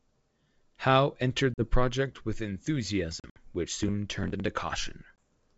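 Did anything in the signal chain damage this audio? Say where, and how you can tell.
Yes, network packet loss on this ADPCM call: hard silent holes at 1.54 s before "project with", 3.20–3.45 s before "which soon turned into", and 5.16 s. The speech then returns slightly distorted while the decoder's predictor resynchronises.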